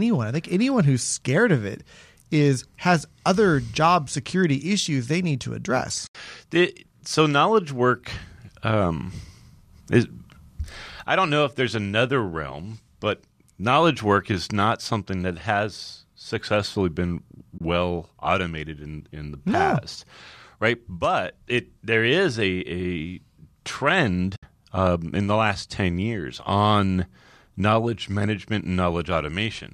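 You get three short dropouts, all classic AAC frame loss with muting: around 6.07 to 6.15 s (about 80 ms), 17.58 to 17.61 s (about 30 ms), and 24.36 to 24.43 s (about 70 ms). Chunks of the coded stream went missing and the decoder just zeroed them, so the overlapping windows fade the speech out and back in. That leaves soft-edged holes. Lengths fit 10 ms frames, likely from low-delay AAC, and the coding itself leaves only light damage.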